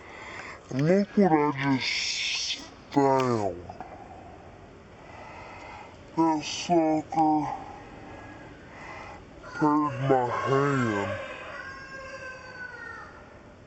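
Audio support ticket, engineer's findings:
Stereo read as mono, throughout. Playback at 0.5x speed, pitch down 12 semitones, faint mirrored image in upper half of spectrum. Probable component: decoder or file reader channel config. Interleaved left/right samples consumed sequentially as a single channel.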